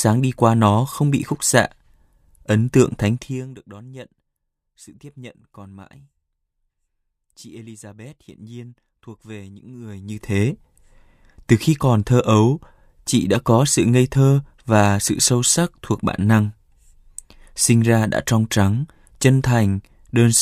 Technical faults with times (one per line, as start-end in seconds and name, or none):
none